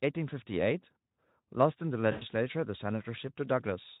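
At 2.11 to 2.25 s, VoIP packet loss concealed by the speech codec: the decoder extrapolates its last pitch across 100 ms of lost audio, producing a fading buzzy tone or coloured noise.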